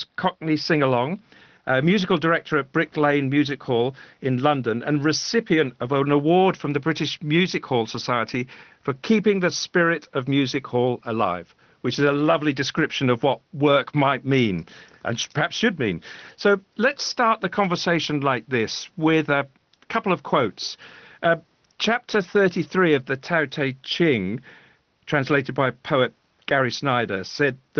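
Speech, with no faults.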